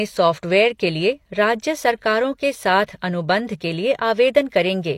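Pre-echo sits at 2.86 s, just ahead of a sharp attack in the speech. The codec coded that stretch as one transform block and spread its quantisation noise across the whole block, so noise scaled for the loud onset also landed in the quieter moment before it. The result is a short hiss about 18 ms long leading into the attack, which arrives softened and smeared rather than crisp.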